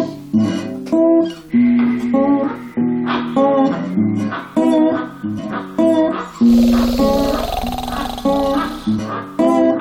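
Near the end, between 8.95 and 8.99 s, compressed frames were skipped: the decoder dropped whole frames that were missing or damaged, so the audio jumps forward by about 70 ms. The join is heard as a sudden jump in the audio at that point.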